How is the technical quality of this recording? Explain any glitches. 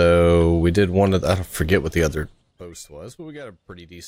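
One level fade carries audible zipper noise.

From 2.14 to 2.60 s, a drop of about 20 dB is made in 4 dB steps, about ten per second, with no smoothing between them. Each abrupt jump clicks, giving a brief ticking zip. The waveform envelope shows a staircase, and the spectrogram shows faint vertical broadband lines at each step.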